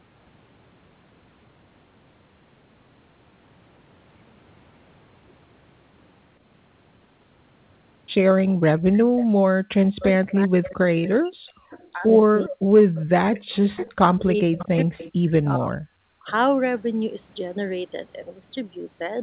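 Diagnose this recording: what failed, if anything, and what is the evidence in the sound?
Call processing: the background is gated by the echo canceller, with room tone dropping about 39 dB at 8.53–8.64 s and about 40 dB at 16.01–16.24 s. The dips are brief and touch only the ambience.

Call processing: from 8.93 to 16.26 s the talker's speech dips by up to about 40 dB, in pieces totalling roughly 4 s. This is likely speech suppressed in double talk, unlike the gating, which leaves the voice untouched.

Call processing: a faint echo leak about 20 dB down follows the speech 420 ms later at 9.17–11.99 s and 440 ms later at 12.95–16.32 s. The cause is likely an incompletely cancelled loudspeaker. It is a delayed copy, not a reverb tail.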